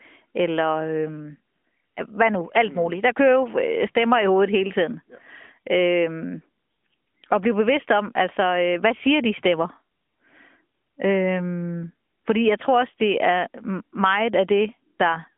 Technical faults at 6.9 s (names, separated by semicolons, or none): none